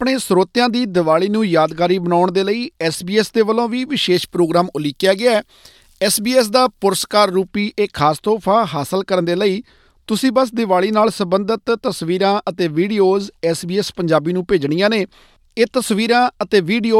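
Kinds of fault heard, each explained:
Pre-emphasis left on: The treble was boosted before recording or transmission, and the matching cut on playback never happened. From about 4.14 to 7.48 s, the high frequencies rise. They sit about 10 dB higher at 10 kHz than at 1 kHz. That shape fits the 50 µs curve used in FM broadcasting. The speech turns thin and bright there, and sibilants hiss.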